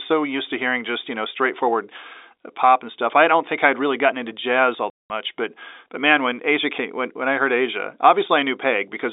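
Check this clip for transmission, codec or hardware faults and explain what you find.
One transmission fault is present: packet loss filled with silence. The call itself travels over G.711 telephone coding, heard as a narrow line band of about 300 Hz to 3.7 kHz. From 4.9 s to 5.1 s the speech drops out completely for 200 ms. Packets carrying that stretch never arrived. The receiver had nothing to play, so it inserted silence. The gap's length fits ten packets of 20 ms each. The result is a sudden hole in the speech, with sound cut off and then resuming abruptly.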